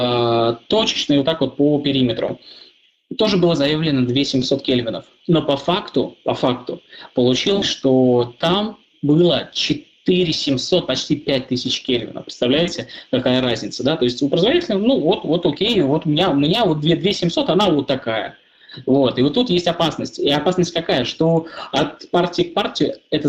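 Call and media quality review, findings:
No audible faults found on review.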